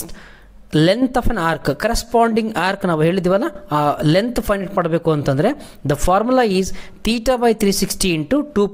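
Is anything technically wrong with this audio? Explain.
Yes. Throughout the clip, a steady low buzz of about 46.9 Hz runs under the sound, and the pacing and pitch stay at their normal rate. This is a block size mismatch (truncated). One stage writes blocks that are slightly longer than the next stage reads, so the tail of every block is discarded. The repeating cut at each block boundary produces the buzz, and its rate fits a 1024-sample block.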